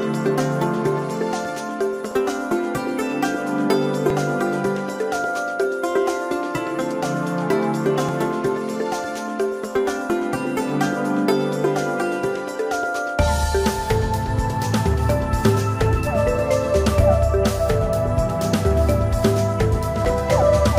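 At 2.12, 4.10, 8.09, 10.10, 16.07 and 20.05 s the sound jumps with a short click or tiny skip. This is overlap between stream segments: the timestamps of adjacent 2.0 s segments overlap, so the player trims that span from audio that was never actually duplicated. Between 5 and 14 ms disappears each time and the waveform steps abruptly. The events fall on segment boundaries at multiples of 2 s, which gives them a loosely periodic feel.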